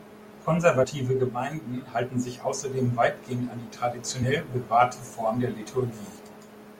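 At 0.83 to 0.85 s the speech jumps forward: compressed frames were skipped, most likely because they were missing or rejected as damaged by the decoder. Roughly 50 ms of audio never plays, which points to about two frames lost. Unlike a dropout there is no silent gap; the sound simply lurches ahead.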